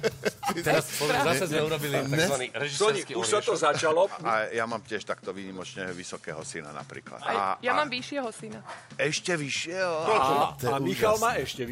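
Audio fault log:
2.34–10.23 s, input switched to a poorer device: the top of the band drops away abruptly, with nothing above 11 kHz, so the sound turns duller until it opens up again at 10.23 s, likely because the input moved to a narrower-band microphone or headset. On a spectrogram the energy above 11 kHz is cut off sharply between those two times, with a faint new noise floor about 45 dB down. The waveform shows no gap at either switch and no clear change in level.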